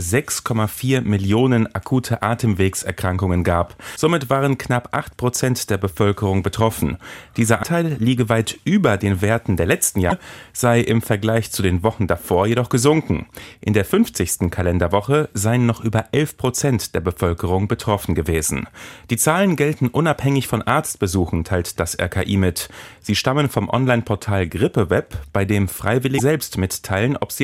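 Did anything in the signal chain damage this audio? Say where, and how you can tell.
Yes, at the codec stage. There are four short glitches in the speech, at 3.95 to 3.97 s, 7.62 to 7.65 s, 10.09 to 10.12 s and 26.17 to 26.20 s. Each lasts about 24 ms, which fits a single MP3 frame. This is likely a broken MP3 bit reservoir. Frames were dropped, so the next frame reached back for borrowed bits and decoded someone else's bytes for a moment before it resynced.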